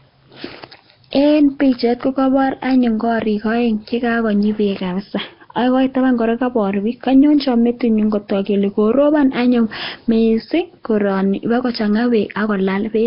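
Throughout the speech there is heavy Nellymoser compression, likely from Flash's old microphone codec. Weak bands get no bits and are refilled with noise, leaving a rough hissy halo and smeared underwater tone, with nothing above 5.3 kHz. Unlike plain low-pass filtering, the hiss clings to the speech itself.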